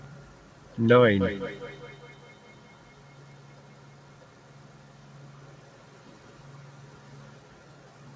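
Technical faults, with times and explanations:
1.21–7.42 s, feedback echo between two devices: speech returns as separate, evenly spaced copies about a fifth of a second apart, each thinner and more ringing, the loudest about 22 dB below the speech. A second device replays this microphone's signal, which gets recaptured, unlike smooth room reverberation.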